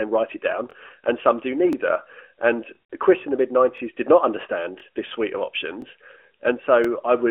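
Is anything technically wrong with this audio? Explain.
Yes, there are overlapping chunks. A brief stutter recurs about once a second, at 0.71, 1.73, 2.75, 3.78, 4.80, 5.82 and 6.84 s. It falls between "write it down" and "and some do", between "in the mid" and "did not", and after "this suite of". The audio was split into 1-second chunks, and each chunk restarts 23 ms before the previous one ended, so that sliver plays twice at every join. Unlike a dropout, nothing is missing: a fragment repeats. The metronomic spacing also separates it from random packet loss. The narrowband telephone tone, with nothing above about 3.6 kHz, is a separate, expected trait of the mobile codec.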